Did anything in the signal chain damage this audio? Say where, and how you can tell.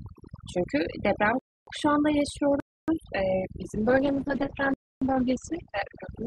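Yes. Throughout, the background is near-silent, with twinkling specks. That is overdone noise removal in call processing, pulling frequency bands down wherever they approach the noise estimate.

Hard-edged holes of about 0.28 s appear at 1.39 s, 2.60 s and 4.74 s. These blocks of digital silence are most likely zeros written when the output buffer wasn't filled in time.

From 3.65 s to the end, the speech turns rough and muffled, with nothing above 8 kHz. This call bitrate drop came from the network: the falling bandwidth estimate pushed Opus from 64 to 11 kbps.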